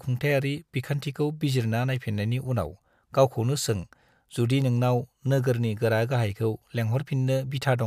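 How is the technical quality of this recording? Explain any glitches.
The recording has a steady clicking fault. Word clock ticks run from 0.19 s to 7.28 s, roughly once per second, about ten in all. The digital link was read on an unlocked clock drifting around 30 ppm, so each slip drops or repeats one sample, producing sharp ticks of uneven strength.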